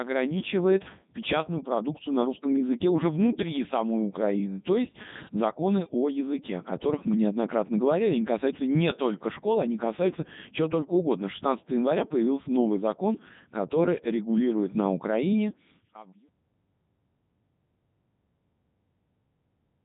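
From the first second, the speech runs through the Codec 2 vocoder, and the damage is heavy. Only pitch, voicing, energy and a spectral envelope survive. The decoder rebuilds everything from sine waves, so it sounds robotic and buzzy. The detail fits its 3.2 kbit/s mode. A smooth fade-out, starting around 15 s and ending at 16.29 s, carries the same buzz.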